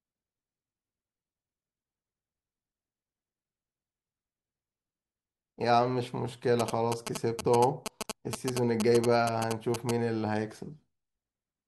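From 6.60 s to 9.91 s, GSM signalling bursts cut through the speech. A nearby 2G phone was sending short radio bursts, and the audio circuit rectified them. The result is a galloping dit-dit-dit of short 217 Hz buzzes, only a little quieter than the speech.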